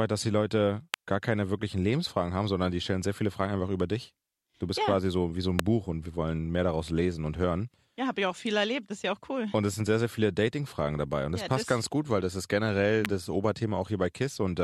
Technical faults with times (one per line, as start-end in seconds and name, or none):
0.94 electrical switching spike
5.59 electrical switching spike
13.05 electrical switching spike